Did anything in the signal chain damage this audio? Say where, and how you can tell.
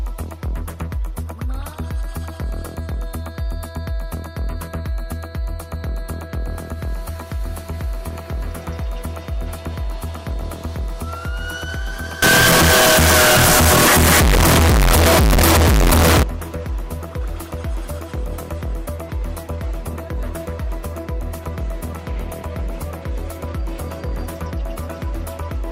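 Yes. From 12.22 to 16.23 s the sound turns very loud and harsh: a near-square waveform at an almost fixed, high level, background noise as loud as the signal, pitch still traceable. This is likely float read as integer at sample-format conversion. The 32-bit float samples are taken as 32-bit integers, so the sign and exponent bits set each value.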